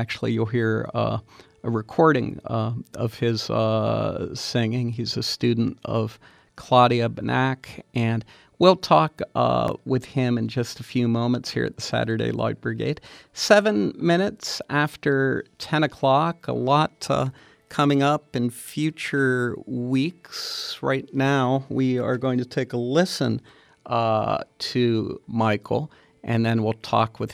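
At 9.68 s and again at 20.60 s there's a repeated buffer: fresh audio didn't arrive in time, so the last 11.6 ms chunk played twice, which fits a 512-sample buffer. Each comes across as a quick click with a hard join, and nothing seems to go missing.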